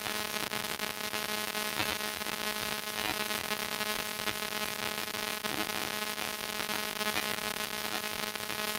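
No technical faults can be heard at any point in this recording of everyday sounds.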